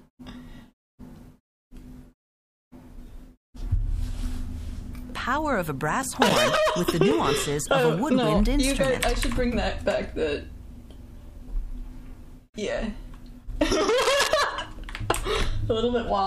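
A run of CD scratch ticks comes in between 5.20 and 7.66 s: ten small clicks and micro-dropouts, roughly four a second, none lasting more than a few milliseconds. That steady rhythm is the giveaway. A blemish on the disc passes under the laser once per revolution and wipes out more data than error correction can rebuild, so the player patches or mutes those samples each time round. Later, from 14.02 to 14.28 s, there's a quarter-second burst of rough, uneven crackle sitting only a little below the level of the sound itself. That's cable scratch noise, most likely from a worn lead, plug or pot being nudged, so its contact resistance jumps around and spits a dense scrape of noise into the signal for a moment.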